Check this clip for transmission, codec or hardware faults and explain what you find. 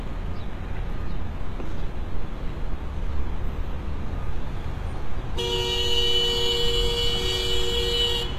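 One codec fault is present, running through the whole clip. HE-AAC compression, likely HE-AAC v2, is audible from start to finish. Only the lower spectrum is coded directly. The treble is synthesised by copying lower bands upward and fitting them to a coarse envelope, so its harmonics don't line up with those below the crossover. The result is a plainly damaged, gritty, metallic top end that stops dead at 14.9 kHz. The heavy damage fits a bitrate around 20 kbps.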